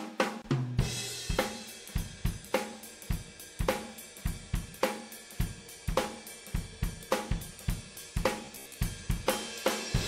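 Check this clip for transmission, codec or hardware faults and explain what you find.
Two faults are present.

From 0.42 to 0.44 s there is a gap at a join of encoded pieces. About 24 ms of silence cuts into continuous sound, with smeared edges. It comes from encoder start delay and last-frame padding kept when separately encoded pieces were joined. Unlike a dropout, the sound resumes exactly where it stopped.

From 8.45 to 8.81 s there is robotic sound from repeated short buffers. The sound becomes a rigid, metallic buzz near 67 Hz. The likely cause is new audio arriving too seldom, so the last 15 ms or so is replayed for about half the span. A fixed pitch set by the repeat length distinguishes it from wavering codec artefacts.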